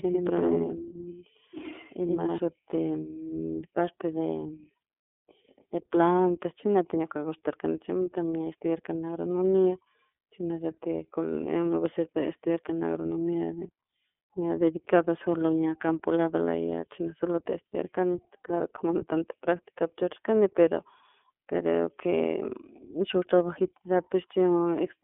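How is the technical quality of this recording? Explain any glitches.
The quality is limited, with narrowband codec damage throughout and an opening doubled section.

The iLBC codec affects the whole clip. Nothing is present above 3.6 kHz. Each 30 ms frame is coded independently, so the speech sounds rough and slightly synthetic. The codec damage is plainly audible. The sound points to the 13.3 kbps mode.

A doubled audio track is already running when the clip starts and lasts until 2.38 s. A second copy follows about a tenth of a second behind, at roughly the same level. It carries no room colour. The likely cause is a second capture path or an edit that left two copies out of step.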